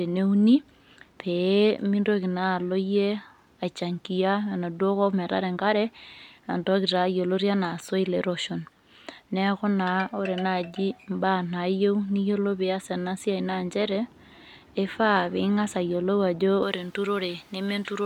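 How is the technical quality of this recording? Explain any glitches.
The recording has one glitch, near the end. From 16.63 s to the close at 18.06 s, the speech turns thin, bright and hissy, with sharpened sibilants. This is pre-emphasis left on: a J.17 treble boost without its matching de-emphasis, leaving 10 kHz about 11 dB louder relative to 1 kHz.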